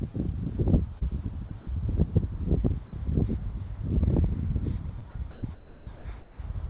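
At 0.99 to 1.03 s there is a short concealed packet loss: about 20 ms of audio arrived too late for the decoder, and the receiver filled the gap by extending the preceding sound before blending back into the real signal. It is heard as a brief smear in the sound. The same fault recurs at 4.99 to 5.03 s, again a 20 ms fill, with the same momentary blur.

Between 1.49 and 1.67 s the sound is chopped, likely by the sender's voice detector switching transmission off and on. About 80 ms in total is replaced by comfort noise, so the sound breaks up. A longer run of the same fault covers 5.31 to 6.39 s, where about 700 ms is swapped for comfort noise, leaving the sound fragmented through most of that stretch.

At 2.87 to 2.93 s the sound is dropped by the voice detector: the sender likely treated a quiet part of the sound as background and stopped sending. About 60 ms is filled with steady comfort noise, and roughly 40 ms of real sound disappears before transmission resumes.

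The call path's G.711 A-law coding carries nothing above 4 kHz, so the whole clip sounds band-limited.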